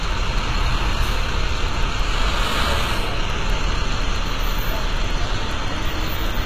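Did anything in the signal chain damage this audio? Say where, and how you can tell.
Yes, at the codec stage, and it runs the whole way through. The top end sounds bright but gritty and metallic, with nothing above 14.9 kHz. That's likely HE-AAC compression rebuilding treble from copied lower bands, which fits a low bitrate around 20 kbps.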